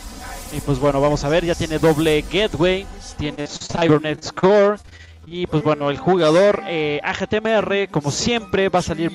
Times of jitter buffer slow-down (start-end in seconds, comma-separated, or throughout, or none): 5.09-6.00